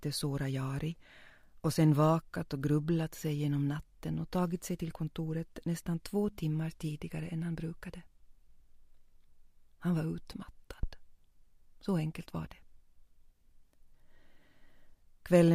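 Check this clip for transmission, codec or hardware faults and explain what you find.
One hardware fault is audible. At 10.83 to 10.91 s a phantom power thump appears: switching the supply steps the input's DC level through the coupling capacitors, giving a deep thud peaking about -21 dBFS that dies in 17 ms. Unlike a plosive or handling bump, it is a single clean step, unrelated to the sound.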